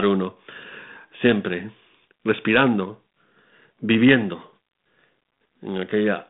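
No technical faults can be heard in this speech.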